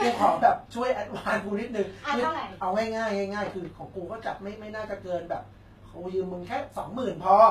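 HE-AAC compression runs through the whole speech clip: the treble reaches high but is rebuilt, likely by spectral band replication copying lower bands upward, so s sounds turn gritty and lispy, nothing sounds above 14.9 kHz, and the plainly audible damage fits a low bitrate near 20 kb/s.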